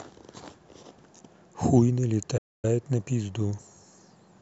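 At 2.37 s the speech cuts out abruptly and the output sits in dead silence for about 256 ms before resuming at 2.65 s. This is a playback stall, likely caused by the player running short of buffered data or its thread being briefly blocked.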